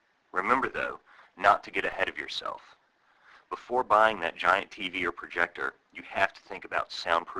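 At 1.92 s a DC step of about -39 dBFS shifts the waveform's zero line, giving a low thump, and the offset then decays away through a 5 Hz high-pass, unlike a click's brief spike.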